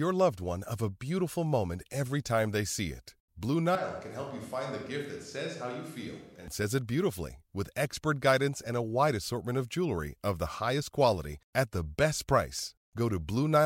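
From 3.75 to 6.48 s the speech suddenly goes roomy and thin, a few dB quieter with more room noise, likely a switch to a distant microphone.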